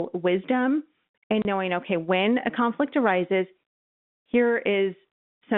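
At 1.42 s the network dropped a short run of packets, and rather than concealing the gap the receiver simply played silence until audio resumed at 1.45 s. This packet loss filled with silence cuts a 30 ms hole into the speech, a length that fits three lost 10 ms packets. The sound stops and restarts abruptly, with hard edges on either side, against the narrow telephone band of the G.711 line.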